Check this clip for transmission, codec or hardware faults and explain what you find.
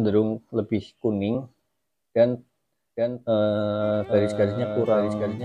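A doubled audio track appears from 2.96 s to the end. The likely cause is the signal being picked up a second time through a slower path, so a full-band copy trails about 0.7 s behind, a few dB quieter, with no decay or room colour, and cuts in abruptly.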